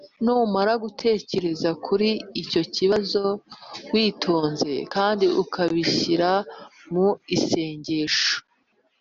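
No audible technical faults.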